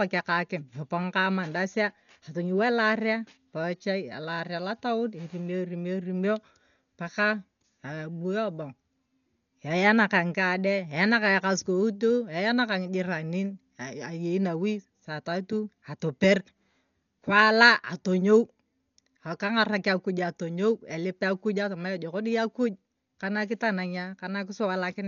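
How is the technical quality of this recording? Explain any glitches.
Quality is poor, with heavy coding damage throughout the speech. It sounds like Dolby Digital compression, likely from a very low bitrate, around 48 kbps. The encoder has cut the band at about 6.9 kHz and left many frequency lines to be filled with decoder noise, so the speech sounds dull, with a rough, fluttering hiss clinging to voiced sounds.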